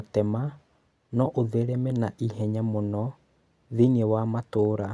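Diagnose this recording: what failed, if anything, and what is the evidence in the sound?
Listening closely to this speech recording, nothing stood out at any stage of the chain as a failure.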